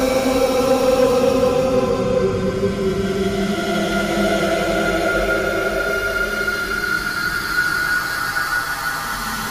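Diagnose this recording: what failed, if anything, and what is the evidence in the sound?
Hard clipping runs from 0.03 s to 2.25 s, with the signal driven about 6 dB past what the stage could carry. Peaks are sliced flat instead of rounding over, and those squared-off tops throw energy into high harmonics, heard as a gritty fuzz riding on the louder moments of that opening stretch. The overload sits at a gain or converter stage ahead of the recording, and it clears after 2.25 s.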